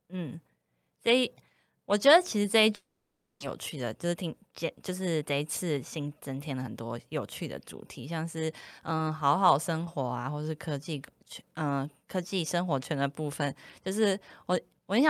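From 2.75 to 3.44 s the speech breaks off into a fading buzz that drops to silence, then resumes with roughly 0.4 s of speech gone. This is likely a long network dropout. Unlike a brief packet loss, the concealment gives up and leaves real silence.

A jitter buffer speed-up follows twice, from 3.76 to 4.50 s at about 107% and from 4.90 to 6.82 s at about 109%. Short pitch-period pieces are cut to drain the excess delay, so the speech sounds hurried while its pitch stays unchanged, unlike a resampling error.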